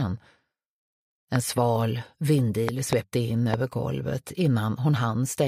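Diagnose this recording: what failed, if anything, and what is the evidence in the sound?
Loud pops at 1.36 to 1.38 s, a double at 2.69 to 2.95 s, and another at 3.54 to 3.56 s, each jumping about 15 dB above the surrounding sound, which keeps running underneath. The second event is two separate hits within about a quarter second. These short, sharp transients are most likely in the analogue wiring: a dodgy connector, switch contact or static discharge dumping a voltage spike into the line that the following stages then shape into a thump.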